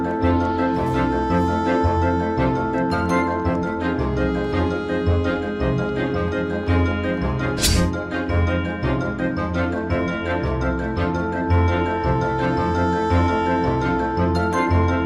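No technical fault can be heard anywhere in this audio. Nothing breaks, drops or distorts at any point.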